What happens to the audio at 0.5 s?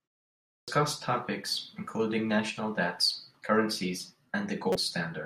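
At 0.5 s the sound is inside a clipped start after a pause, running from 0.42 to 0.68 s. After about 0.42 s of silence, the output path had gone idle and needed time to wake, so the first 258 ms of what followed never reached the listener. The audio then jumps in abruptly, mid-onset, on "topics including national debts". Unlike muted pauses, which only silence the gap and lose nothing, this one swallows the beginning of the sound itself.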